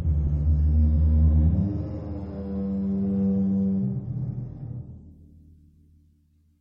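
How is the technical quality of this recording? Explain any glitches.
The opening five seconds are noticeably degraded, then quality recovers abruptly. This is an adaptive stream starting at a low bitrate: from 0.0 s to 5.11 s the sound is dull, with the treble largely absent and coarse codec artefacts, which fits a low-rate MP3 around 32 kbit/s. The player chose that version to start quickly and switched up after measuring the connection. At 5.11 s the highs return and artefacts subside, consistent with roughly 128 kbit/s, with no gap at the switch.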